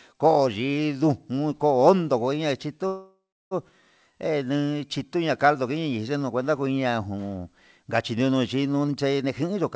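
Speech carried over a call path, with band-limited audio and nothing above 8 kHz, consistent with a G.722 wideband codec at around 64 kbps. From 2.87 to 3.54 s there is a call audio freeze. The last sound is stretched into a decaying buzz that fills about 640 ms, and roughly 330 ms of that is silence before the speech resumes exactly where it stopped. The likely cause is packets stalling in transit and the jitter buffer running dry, so the gap is inserted rather than losing any speech, and the playout delay grows by the same 640 ms. From 9.14 to 9.62 s a jitter buffer speed-up occurs. The receiver trims repeated pitch-period-sized slices, about 150 ms in total, to work off the accumulated backlog. The speech plays at roughly 126% of normal rate without any pitch change and sounds rushed.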